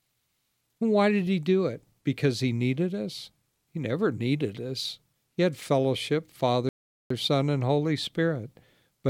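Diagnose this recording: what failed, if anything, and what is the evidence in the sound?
The failure is at playback: a rebuffering stall. Right after "had fellowship" the speech drops to silence from 6.69 to 7.10 s. It then picks up exactly where it stopped. The player's buffer ran dry, so nothing was lost but about 0.41 s was added.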